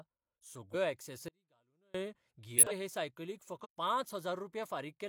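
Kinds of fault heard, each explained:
Compressed frames skipped: Whole blocks of the coded speech never play, so the sound jumps forward instead of pausing. This happens at about 0.70 s, 2.54 s and 3.61 s, losing roughly 0.1 s, 0.2 s and 0.15 s of material. Unlike a dropout there is no silent stretch, just missing content.
Audio dropout to a faint residue: From 1.28 s to 1.94 s, about 0.66 s, the speech cuts off abruptly and returns just as abruptly. Only a faint sound remains in the gap, about 35 dB below the speech. The likely cause is the wanted signal being lost while the downstream path stayed live. The hard edges set it apart from a natural pause or fade, and the audible residue sets it apart from a clean skip.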